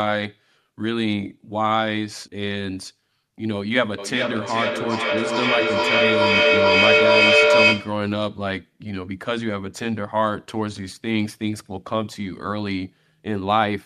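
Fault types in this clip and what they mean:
Feedback echo between two devices: From 3.98 s to 8.12 s the speech comes back around every 400 ms. A second device in the room replays this audio, and each echo canceller removes only its own playback, so the loop feeds itself. The repeats grow rather than fade, peaking about 8 dB above the speech and sounding thin and ringing. A spectrogram shows evenly spaced copies of each syllable with narrowing, smeared bands, and the waveform envelope swells instead of decaying.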